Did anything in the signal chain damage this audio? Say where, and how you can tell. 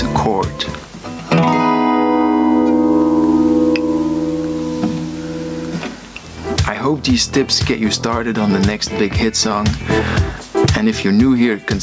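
Yes. Gain pumping runs throughout: the gain swings around 20 dB, pulling down on each loud sound. The likely cause is excessive input gain driving a fast limiter.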